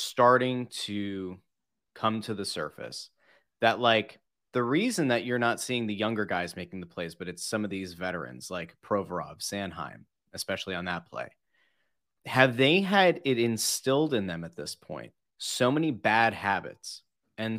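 No technical faults can be heard anywhere in the speech.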